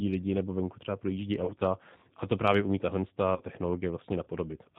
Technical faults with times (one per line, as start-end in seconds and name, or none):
0.00-4.78 G.729 codec
1.45-1.53 VoIP packet loss concealed by the speech codec
3.36-3.42 VoIP packet loss concealed by the speech codec